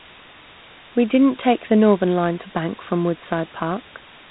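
Low bit depth with dither runs from start to finish. The sound has been reduced to very few levels, consistent with roughly 6-bit resolution, and random dither was added before rounding, so the rounding error comes out as noise rather than distortion. It sits only around 20 dB below the speech: a steady, even hiss that never tracks the signal and never turns harsh or crackly, present in pauses as much as under speech.

Dialogic VOX ADPCM damage also covers the whole clip. This codec stores each sample as a 4-bit step relative to a prediction, and the plainly audible grit here fits a 32 kbps stream. Nothing reaches above 3.8 kHz, so sibilants and consonant detail are dulled and boxy, with a telephone-like narrowness. Layered on the dither hiss, a rougher, signal-following graininess rides on the speech itself, rising and falling with it as the step sizes adapt.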